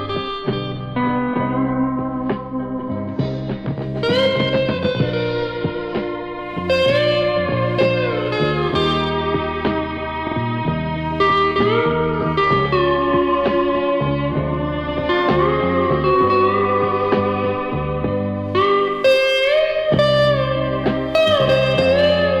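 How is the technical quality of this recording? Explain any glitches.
Repeated frames at 10.27 to 10.36 s: a block of about 46 ms of compressed audio is played twice more than it should be, which fits a pair of codec frames being duplicated. The sound stutters briefly, and the clip gains about 93 ms.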